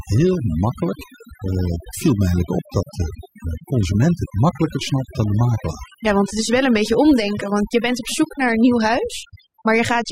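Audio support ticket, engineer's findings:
Artifacts throughout; background dropped, breaking up into twinkling specks. Probable component: noise suppressor set too aggressively. Overdone noise removal: it gates individual bands near the noise estimate, taking quiet speech detail along with the noise.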